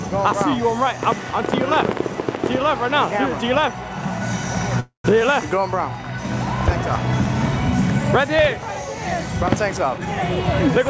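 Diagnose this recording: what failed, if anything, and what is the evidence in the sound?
At 4.80 to 5.06 s there is a call audio freeze in the network and jitter-buffer stage: the last sound smears into a fading buzz, then about 130 ms of silence, before resuming intact. The spectrogram shows flat horizontal streaks, then a blank gap. Delayed packets likely emptied the buffer.

From 9.98 to 10.16 s a jitter buffer speed-up in call processing plays the sound at 150% speed with unchanged pitch, trimming about a tenth of a second. The waveform shows whole pitch cycles cut out, and the spectrogram's sub-8 kHz band shortens without shifting.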